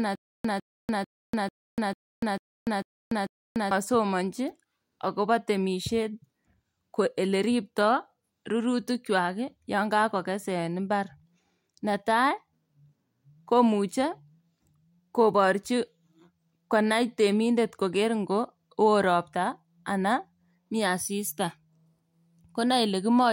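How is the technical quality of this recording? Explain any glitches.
The recording opens with a stutter with silent gaps, already under way at 0.00 s and lasting until 3.71 s. The playback or stream likely stalled, replaying its last fragment at each retry before running dry. A 152 ms burst of speech repeats eight times, every 445 ms, separated by 292 ms of digital silence, and the speech that belonged in that span is lost.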